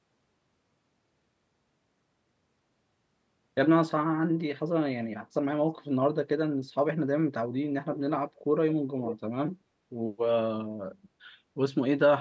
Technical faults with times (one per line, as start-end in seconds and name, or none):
8.35-8.40 echo leak
9.03-9.16 echo leak